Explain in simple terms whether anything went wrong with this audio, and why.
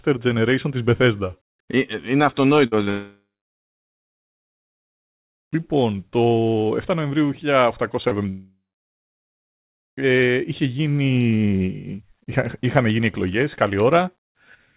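Yes, the call's connection had problems. At 2.66 to 2.75 s, a burst of packet loss left a gap that the receiver covered with a fading continuation of the last sound, so about 60 ms went missing. At 2.84 to 2.90 s and at 8.08 to 8.14 s, short concealed packet loss briefly smears the audio as the receiver papers over roughly 30 ms each time. From 2.90 to 5.29 s and from 8.29 to 9.78 s, the sound fades and then goes silent for about two seconds and just over one second. This is likely a long network dropout, and the audio resumes with that stretch lost. Because of the call codec, the sound also has a phone-like dullness throughout, with nothing above 4 kHz.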